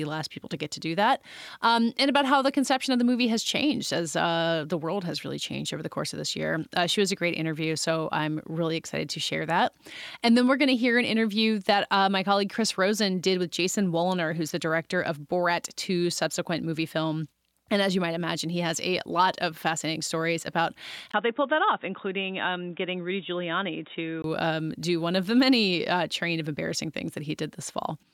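Input switched to a poorer device is the likely cause from 21.12 to 24.24 s. After "of fascinating stories about", a 20 ms gap leads into dull, boxy speech with a narrower band, a level about 5 dB lower and a faint new noise floor, until "um do one of".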